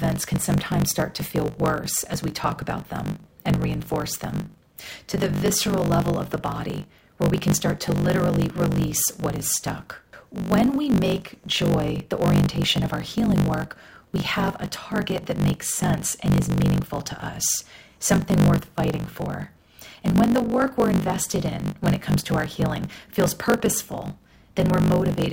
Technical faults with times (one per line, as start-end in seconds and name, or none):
0.00-25.32 block size mismatch (truncated)